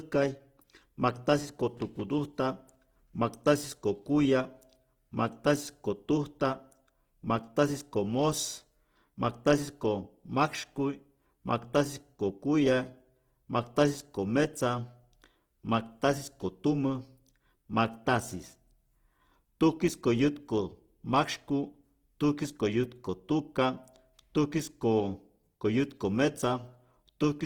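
Throughout the speech, the sound has a rough, grainy texture, with tonal parts turning noisy instead of swirling, though the top end extends to about 20.2 kHz. This is likely Opus compression in its music mode, which fits a low bitrate around 16 kbps, filling starved bands with noise.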